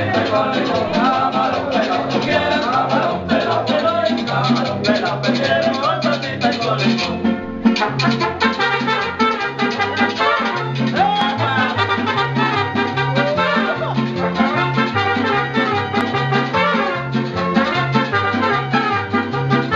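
A sharp, loud pop cuts through the audio at 11.21 to 11.24 s, and a second, matching one follows at 16.01 to 16.03 s. Each is a single brief click-like burst that stands well above the surrounding level, while the sound carries on beneath it. These are loud pops, likely caused by a sudden voltage pulse, perhaps from a switch, static discharge or a driver glitch, added to the signal and shaped by the circuitry downstream.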